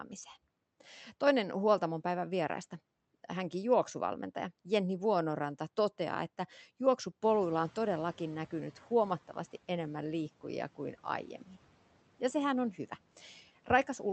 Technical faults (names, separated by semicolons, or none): noise suppressor catching up; speech cut by the noise suppressor